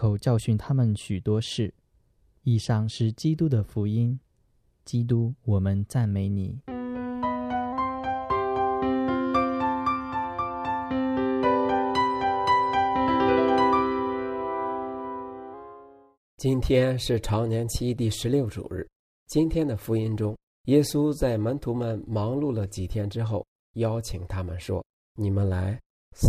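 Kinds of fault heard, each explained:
Drift correction step: From 6.71 to 7.73 s the audio slows by 5.6% and drops about a semitone (roughly 100 cents), then snaps back to normal speed and pitch. Speed and pitch move together and change in a single jump, with no gradual glide or repeated wobble. That sets it apart from tape wow or flutter, and the brief one-second stretch points to a likely resampler briefly changing rate to rebalance its buffer.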